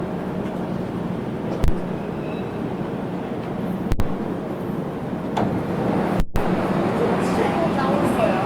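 Throughout the clip the sound has a swirly, smeared, hollow quality with blurred attacks, and the spectrum shows nothing above 20.1 kHz. This is generation loss: the audio was likely decoded and re-encoded about seven times, in a way that fits an Opus chain near 64 kbit/s. Each pass requantises on a shifted frame grid, so noise piles up. On a spectrogram this looks like a smeared texture across the bands.

At 1.64 to 1.68 s, 3.92 to 4.00 s and 6.20 to 6.36 s the output jumps to invalid numbers at full scale. A calculation produced infinite or invalid values that were turned into the largest positive or negative value, so the waveform sits flat at one extreme, far beyond the audio's peaks, for 40, 80 and 160 ms. The shorter blocks sound like single bangs. The 160 ms block gives a loud pop at each edge with nothing heard between. On a spectrogram each edge shows as a full-height vertical stripe.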